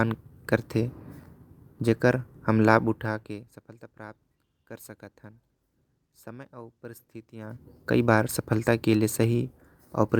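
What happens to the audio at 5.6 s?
At 5.6 s the speech carries on intact, with no dropout, click or other fault, and any gradual shift in level there is a smooth, fader-like change that is working as intended.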